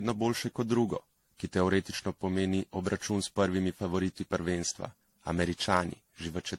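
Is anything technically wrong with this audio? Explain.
Yes. Throughout the speech there is generation loss: a swirly, hollow, smeared sound with blurred consonant attacks. It is likely from about seven repeated AAC-LC encodes, at what sounds like 64 kbit/s, with noise building up on each pass. A spectrogram shows nothing above 16.6 kHz.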